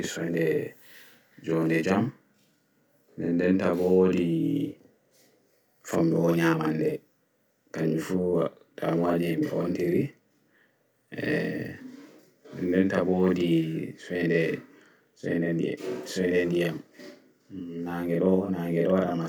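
Channel delay (doubling) runs throughout this speech clip. One channel arrives about 42.7 ms late, which fits a 2048-sample buffer, and when the two are summed to mono the late copy sits at equal level just behind the original as a distinct slap.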